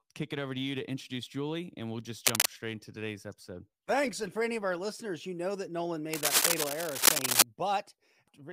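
A speech clip with cable scratch noise. Dense, uneven bursts of scratching cover the sound from 2.25 to 2.49 s and again from 6.13 to 7.44 s. They sit well above the speech level. A worn cable or connector being moved is the likely cause.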